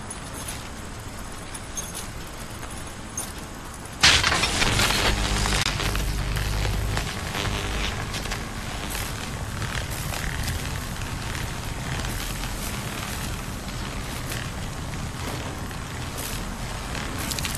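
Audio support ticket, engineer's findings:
Gap at a join of encoded pieces, 5.63–5.66 s: about 24 ms dropout in continuous sound, edges smeared by the codec, sound resumes where it stopped. Component: encode/concatenation stage. Segments joined untrimmed; encoder start delay and final-frame padding left in.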